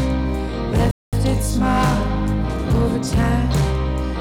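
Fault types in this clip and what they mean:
Hard clipping: The signal runs about 9 dB beyond what one stage can pass, so peaks are sheared flat. Only a small share of samples hit the ceiling, but the flattened tops add high harmonics, giving a harsh fuzz on the loudest moments throughout.
Bluetooth stall: The sound cuts to silence at 0.91 s and resumes at 1.13 s, a 215 ms gap. The likely cause is a wireless link where interference delayed packets, the receiving buffer emptied, and playback waited for retransmitted data.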